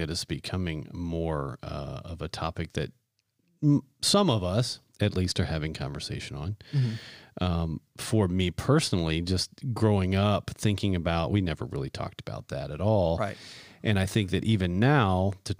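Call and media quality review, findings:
No audible faults found in this speech recording.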